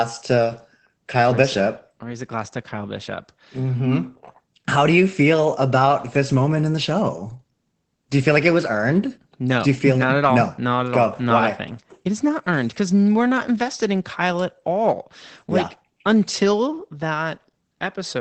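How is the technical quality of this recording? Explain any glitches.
The recording has clearly audible codec damage throughout. Opus voice compression runs the whole length of the clip: the speech has been squeezed through the SILK linear-prediction coder in wideband mode, and nothing survives above about 8.6 kHz, so sibilants and breath lack air. With so few bits, the coder describes the excitation roughly, which makes the speech sound muffled, hoarse and faintly robotic. That degree of damage fits a low voice bitrate around 12 kbps.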